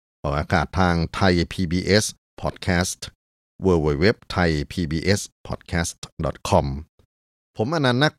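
Nothing in this speech recording stands out as a technical fault; there's no moment where anything goes wrong with the audio.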